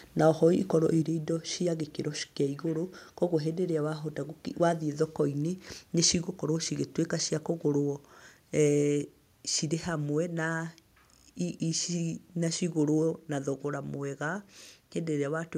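A microphone volume stepped down at 1.02 s, just after "na oho ikorwo": the speech and background drop together by about 4 dB in a single step. The likely cause is the call software judging the input too hot and lowering the device's input volume.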